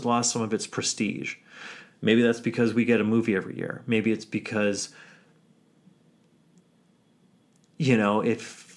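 No technical faults can be heard anywhere in this speech recording.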